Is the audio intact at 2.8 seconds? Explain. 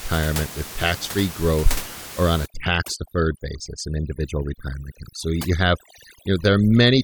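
No. At 2.8 seconds the audio is inside a stretch of overdone noise removal that begins at 2.46 s, right after "growth or on a", and runs to the end of the clip. The noise reduction is set far too aggressively against room noise sitting about 14 dB below the speech. Any frequency band close to its noise estimate gets cut almost to nothing, so the background drops and breaks up into twinkling specks. Quieter parts of the speech go with it.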